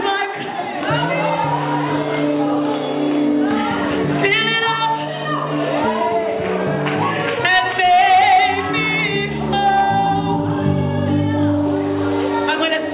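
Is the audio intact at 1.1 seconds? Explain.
Yes, the audio at 1.1 s is intact, carried through the WebRTC call path as ordinary narrowband telephone-quality sound with nothing above 4 kHz, which fits a 64 kbps G.711 A-law codec.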